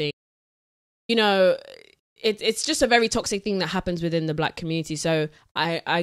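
Audio dropout to silence, from 0.11 to 1.09 s: the speech cuts off almost as soon as the clip begins and returns mid-flow just under a second later, about 0.98 s lost. The gap is silent, with no room tone or hiss, so the input likely dropped away, through a lost connection or a brief mute, while the recorder kept writing silence. Whatever was spoken in that stretch is gone.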